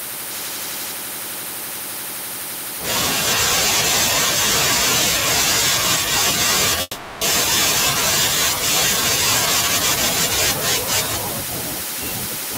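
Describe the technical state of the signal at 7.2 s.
At 7.2 s the speech sits at the tail of a long network dropout spanning 6.81 to 7.23 s, with about 400 ms of audio missing. The receiver stretches the last sound into a fading buzz for roughly 0.4 s, then about 10 ms of silence, likely from lost packets. On a spectrogram, smeared decaying bands give way to a blank sliver before speech resumes abruptly.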